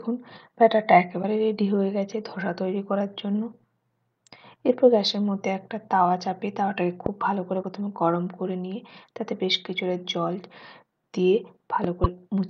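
At 1.22 to 1.24 s the sound skips forward, and the audio comes out garbled for roughly one frame's length. This is a broken MP3 bit reservoir, likely caused by frames being cut from the stream: the next frame reached back for borrowed data and decoded bytes from the wrong frame. The 26.1 ms frame fits 44.1 kHz MP3. The same skip and garbling return at 7.62 to 7.64 s and 12.03 to 12.06 s.

At 7.06 to 7.08 s a single sharp pop, about 15 dB above the surrounding level, lands on top of the sound, which continues beneath it. This is a loud pop, likely from a sudden voltage step such as a switch, static discharge or driver glitch, with the following circuitry shaping it into a short click. Another single pop of about 15 dB occurs at 11.84 to 11.86 s.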